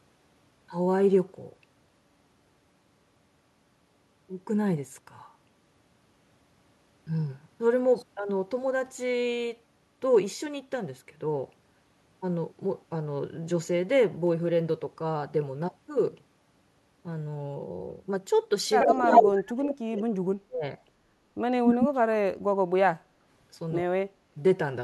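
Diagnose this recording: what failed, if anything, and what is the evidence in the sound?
Hard clipping at the converter or sample-format stage. A brief flat-topped peak at 10.14 to 10.18 s gives a short crackle as the speech hits full scale.

Echo leak in call processing. An 81 ms delayed copy of the speech appears at 18.8 to 19.31 s, 19.68 to 19.74 s and 21.66 to 21.89 s, likely from an echo canceller leaving residue.

Speech suppressed in double talk, also in call processing. The speech dips at 18.86 to 19.04 s, 19.26 to 20.64 s, 21.55 to 23.2 s and 23.82 to 24.15 s, from a slight drop to deep cut-outs. The likely cause is an echo canceller attenuating both talkers at once.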